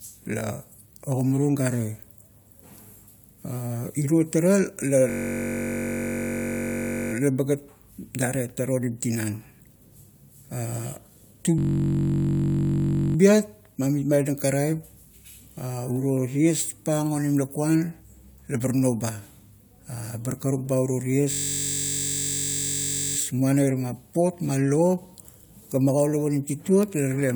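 System hang loop at 5.10 to 7.13 s (just before "laba gat"), 11.58 to 13.16 s and 21.31 to 23.17 s in this speech clip: one 21.33 ms slice repeats while the system freezes, giving a steady 46.9 Hz buzz, which fits a 1024-sample ring buffer cycling.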